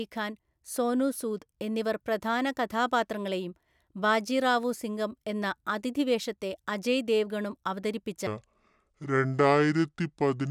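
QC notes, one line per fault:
8.27–10.51 s: section at the wrong speed. The final stretch of speech runs at 0.623x, so it drags and sinks about seven semitones, likely from playback against the wrong clock. Spectrogram harmonics and formants drop and spread in time. Waveform cycles visibly lengthen.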